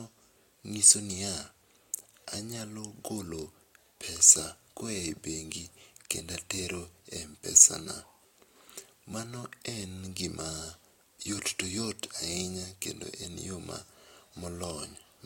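Speech with a block size mismatch (padded) throughout. A zero-filled gap in each block causes a 43.1 Hz buzz, which fits 1024-sample reads. The slowdown is negligible.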